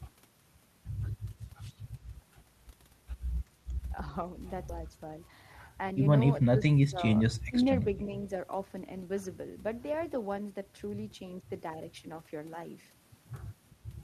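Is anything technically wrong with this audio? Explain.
Yes, there are three kinds of problem, all packed into the middle of the clip.

At 4.69 s there's a skip ahead. Roughly 0.4 s of speech was thrown away, most likely while later audio was already queued, and playback jumps straight across with no fill, so the two sides butt together abruptly.

From 5.28 to 5.71 s you get a jitter buffer speed-up. The buffer was holding too much, so it trimmed out tiny pitch-period slices, around 50 ms in total, making the speech run at about 109% speed. It sounds briefly rushed but keeps the same pitch.

Then there are three dips from speech suppressed in double talk, at 6.38 to 7.01 s, 7.48 to 7.59 s and 7.83 to 8.25 s. The level drops by about 20 dB, about 25 dB and then only a few dB. The likely cause is the echo canceller clamping down while both ends were talking.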